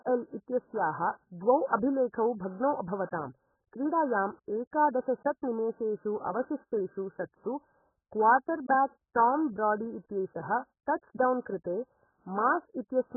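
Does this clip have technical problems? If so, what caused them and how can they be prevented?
Yes. AAC compression damage runs through the whole clip: the speech is dull and muffled, with nothing above about 1.7 kHz, and it carries a smeared, warbling texture with fizzy sibilants. The likely cause is heavy AAC-LC encoding at a very low bitrate, which fits roughly 8 kbps. With so few bits, the encoder drops everything above a low cut-off and coarsely quantises or noise-fills the bands it keeps. To prevent it, encode speech at 32 kbps or more, or use a codec designed for low-bitrate speech.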